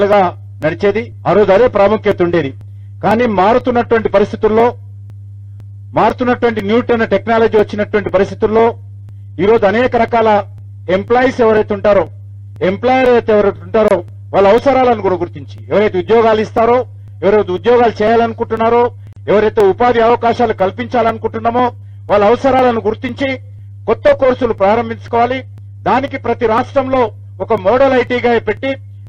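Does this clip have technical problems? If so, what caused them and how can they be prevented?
Yes. Two faults can be heard.

Periodic USB or driver dropouts run from 0.13 s to 29.07 s, with a short tick every 0.498 s, some fifty in all. Each time, roughly 2 ms of audio is skipped outright rather than filled with silence, so the sound jumps forward slightly. Their strict half-second spacing sets them apart from random clicks or network loss, which have no fixed rhythm. A background task is stalling the USB bus or audio driver at a fixed interval. To prevent this, find and disable the polling process or use a larger buffer and a dedicated audio interface driver.

There are two gaps at a join of encoded pieces: about 27 ms of silence at 13.88 s and about 37 ms at 19.13 s. Each gap opens in continuous sound, with edges softened by the codec, and then the sound carries on from where it stopped. 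Unlike the dropouts, these are silences inserted into the audio, not tiny skips. They are longer and occur only twice, at irregular points. They come from separately encoded segments whose encoder start delay and final-frame padding were kept when the pieces were joined. To prevent this, join the pieces before encoding, or trim the delay and padding using gapless metadata.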